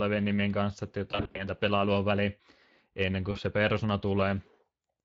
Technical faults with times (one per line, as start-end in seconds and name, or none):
0.00-5.04 Speex codec
1.11-1.47 VoIP packet loss concealed by the speech codec
3.31-3.38 VoIP packet loss concealed by the speech codec